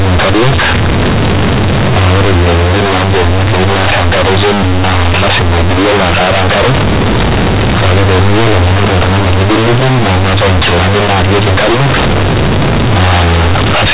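A speech recording, and the whole thing, start to finish, suffers from companded audio read as linear. The A-law bytes are being played straight as linear 8-bit samples without expansion, so every sign flip throws the waveform across roughly half the output range. Quiet passages come out as loud as the peaks, and you get a harsh, buzzy, very loud distortion with heavy noise filling the pauses. The telephone-band G.711 A-law coding at 8 kHz underneath is fine.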